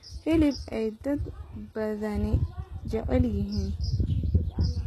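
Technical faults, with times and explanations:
Throughout, HE-AAC compression: the speech has plainly audible codec damage, with s sounds turning gritty and metallic, and nothing at all above 12.3 kHz. This is likely HE-AAC at a very low rate, consistent with about 16 kbps, rebuilding the treble by copying lower bands upward instead of coding it. On a spectrogram, the upper band looks like a smeared, repeated copy of the region below, with harmonics that fail to line up, and it ends in a hard ceiling at 12.3 kHz.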